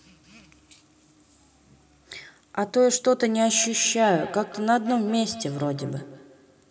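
From 3.45 s to the end of the speech at 6.70 s there is feedback echo between two devices. A second device in the same room is replaying this microphone's signal, the microphone captures it again, and the local echo canceller cannot remove sound it did not play itself. Each syllable returns at an interval of roughly a fifth of a second, thin and ringing, peaking at about 16 dB below the direct speech.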